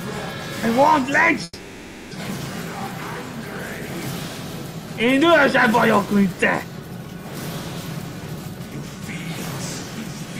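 From 1.43 to 2.13 s, the sound becomes a fading buzz, then silence. A long network dropout likely lost about 0.68 s of audio.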